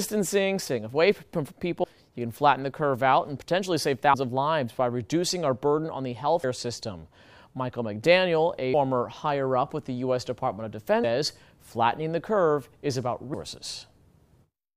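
At 1.84, 4.14, 6.44, 8.74 and 11.04 seconds the sound abruptly skips forward, each time dropping about a fifth of a second and butting the two sides together with no gap. The jumps arrive every 2.3 seconds like clockwork, which points to audio missing between chunks. The recorder likely processed the signal in 2.5-second blocks and lost a short stretch each time it closed one block and opened the next.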